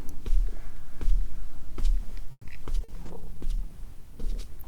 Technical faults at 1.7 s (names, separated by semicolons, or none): none